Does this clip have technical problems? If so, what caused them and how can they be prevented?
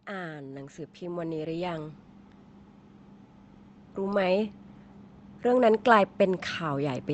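Yes. Automatic gain rising from 0.07 to 2.04 s: the gain control judged the input too quiet and lifted speech and background together by about 9 dB. Prevent it by setting a fixed input gain and disabling automatic gain control.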